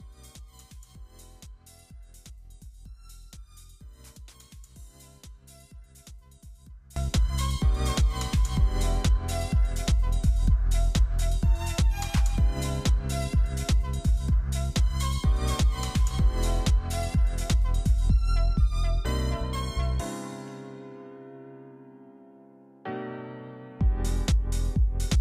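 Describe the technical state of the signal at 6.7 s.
At 6.7 s the signal sits in a stretch from 0.0 to about 6.96 s where the mono sum has collapsed by about 24 dB, most likely because one channel is inverted. With one side's polarity reversed, everything common to both channels cancels when they are combined, leaving only their difference. That leftover is a faint copy made of the mismatch between the channels, which separates it from a plain gain drop, where the full tonal balance would survive at lower level.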